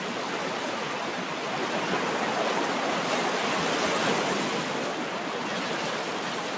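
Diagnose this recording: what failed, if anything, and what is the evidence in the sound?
Nothing failed: the audio carries the expected coding noise of a WebRTC call path, with no content above 8 kHz, which fits a wideband codec such as G.722, and no event anywhere points to a broken stage.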